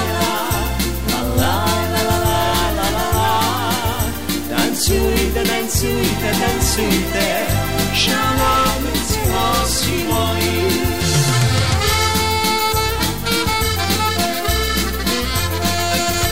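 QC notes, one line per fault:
Throughout, low bit depth without dither: the audio was likely truncated to very few bits, roughly consistent with 5, without dither, so the rounding error tracks the signal. That produces grainy distortion only about 20 dB below the sound, gritty on quiet passages, which sputter or drop out.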